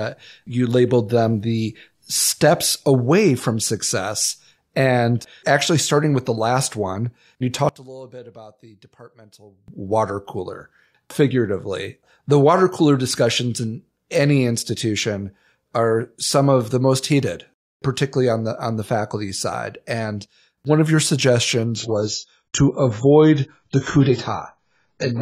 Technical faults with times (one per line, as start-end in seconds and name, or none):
7.69-9.68 one channel inverted
21.76-25.21 adaptive stream at a lower bitrate